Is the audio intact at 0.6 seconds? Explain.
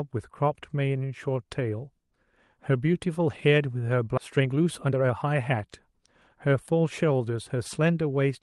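Yes, the speech at 0.6 seconds is intact, with no dropout, glitch or other fault at that moment.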